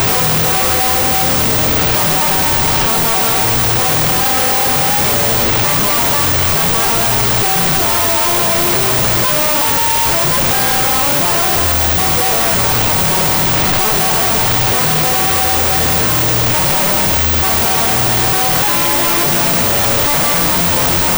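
Throughout, a wrong sample width reads 16-bit samples as unsigned 8-bit, leaving the sound buried in loud noise at half speed, an octave low.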